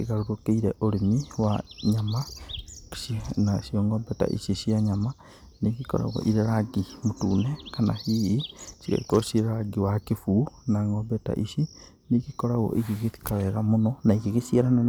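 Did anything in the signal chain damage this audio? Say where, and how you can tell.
Yes. Hard clipping at 14.10 s: a brief crackle as a speech peak overdrives the converter by about 2 dB. Its flattened top adds harsh high harmonics.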